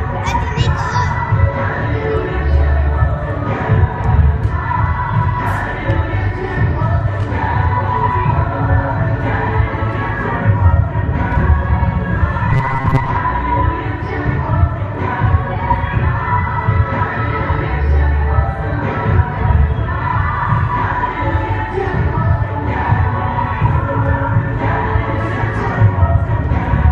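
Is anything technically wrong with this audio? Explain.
Yes. From 12.51 to 13.18 s there is robotic sound from repeated short buffers: a rigid, metallic buzz at 134 Hz. The likely cause is late audio being covered by replaying a chunk of about 7.5 ms, for about half that stretch. A spectrogram shows evenly spaced harmonic lines at multiples of 134 Hz. The waveform shows identical short cycles.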